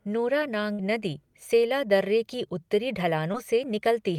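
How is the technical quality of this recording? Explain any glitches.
The recording has two network glitches, both from lost audio packets.

At 0.73 to 0.81 s, just before "नदी सेला", there is a burst of packet loss. Several packets arrived too late or not at all. The receiver held the last sound for about 53 ms and faded it down, so it comes out as a brief held sound. Then the speech jumps ahead. Roughly 60 ms of the real audio is simply gone.

At 3.33 to 3.36 s, right after "की उत्तरी", there is a short concealed packet loss. Only a sliver of audio went missing, about 20 ms. The decoder continued the previous sound for about 11 ms, then blended back into the real signal. You hear a quick smear or wobble. A short consonant there may be swallowed.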